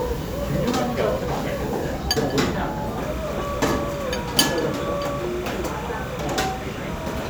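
From 2.98 s to the end, a steady chirping warble sits well below the main sound, flipping between pitches near 1 and 2 kHz. This is timecode bleed: linear timecode, whose rhythm fits a 29.97 frames-per-second code, leaking into the audio from an adjacent track or cable.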